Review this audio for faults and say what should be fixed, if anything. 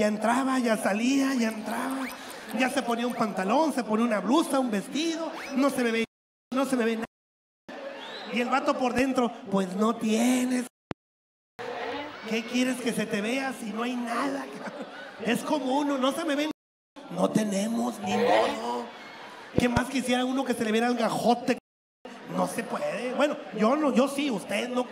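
Loud pops at 8.99 s and 10.91 s, each about 15 dB above the sound, and a pair from 19.58 to 19.79 s, about 20 dB up, with the sound continuing beneath. A voltage step, likely from a connector, switch or static discharge, is entering the chain. Secure connections and switch equipment only while outputs are muted.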